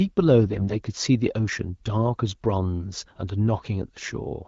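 From 0.44 to 0.74 s, AMR bit errors roughly one bit in ten corrupt frame data, misplacing excitation pulses so the speech turns hoarse, scratchy and gargly.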